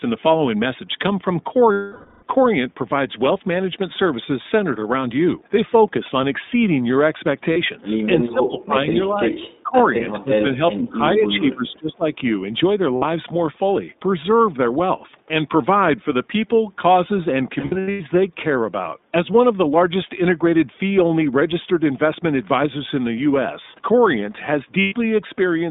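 The speech runs through the iLBC codec for the whole clip. Each 20 ms frame's excitation is coded on its own within a narrow line band of roughly 200 Hz to 3.7 kHz, which fits iLBC's 15.2 kbps mode. The codec damage is plainly audible: the voice is clear but thin, with a rough, slightly synthetic grain and nothing above about 3.7 kHz.

From 1.72 to 2.24 s, 500 ms of audio never arrives, which fits a run of lost iLBC frames. The decoder fills the gap by repeating the last pitch cycle mixed with noise and fading it, so a held, buzzy vowel trails off. A 40 ms loss at 7.52 s leaves only a brief blur.

From 8.32 to 12.18 s the voice dips and breaks up in pieces at 8.32–8.89 s, 9.13–9.46 s, 9.63–9.95 s and 10.18–12.18 s. The drops reach about 15 to 25 dB, and the last stretch is affected for roughly a second and a half. This is likely speech suppressed in double talk, with the echo canceller pulling down the near talker while the far side also speaks.

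Further lost iLBC frames produce short concealment smears at 12.96–13.05 s (60 ms) and at 24.80–24.94 s (120 ms). Between 17.60 and 18.01 s, 300 ms of losses are scattered over about 400 ms, with the longest gap around a tenth of a second. The result is a stuttering, breathy patch, and the voice recovers almost immediately after each loss.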